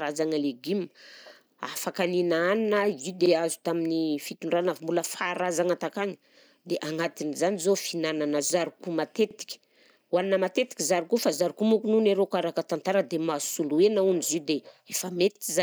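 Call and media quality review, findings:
Overlapping chunks at 3.26–3.31 s, 9.31–9.35 s and 15.35–15.40 s. A brief stutter sits at each join, every 6.0 s. The first lands just before "azo tamin'ny fitondrana" and the second just after "agnatin'izany zao fihinanana zarko". Each join replays 47.9 ms of speech because the next chunk starts before the previous one ends. The probable cause is a chunked processing or transport stage with misaligned chunk boundaries.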